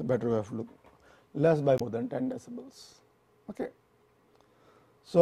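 Damaged data in a compressed stream occurs from 1.77 to 1.82 s. Part of the encoded stream there is wrong, so the decoder misreads or rejects those frames and loses sync while hunting for the next frame header, leaving a brief 50 ms disruption in the sound.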